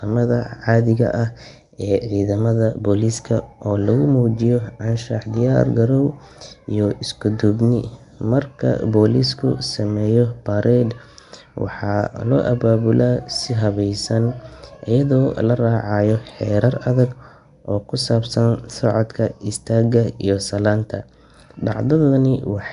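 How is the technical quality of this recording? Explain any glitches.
The recording has clearly audible codec damage from start to finish. Nellymoser compression, throughout: the speech has a rough, hissy halo and a smeared, underwater quality, with nothing above 10.7 kHz. The likely cause is Flash's Nellymoser Asao codec, at a rate consistent with about 44 kbps. It codes short blocks with a fixed, small bit budget, so weak bands get no bits and are filled with noise.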